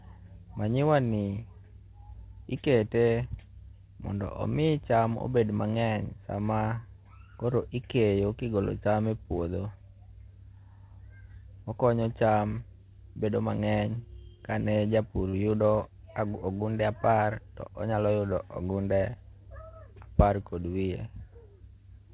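From 15.29 to 15.45 s the speech briefly hangs: one sound is held slightly too long before the talker carries on exactly where they left off. This is a short stall from a late packet. A packet missed its slot, the jitter buffer ran dry, and the receiver stretched the last sound by about 42 ms until the packet arrived. Nothing is lost, but the timing slips by that amount.

From 17.38 to 17.87 s the speech sounds rushed, running at about 108% speed while the pitch stays where it was. This is a jitter buffer speed-up. The buffer was holding more audio than it aims for, so the receiver cut many tiny pitch-period-sized pieces in quick succession. Together they take out roughly 50 ms and pull the delay back down. Throughout, the call path carries nothing above 4 kHz, which gives the narrow telephone band that fits G.711 A-law.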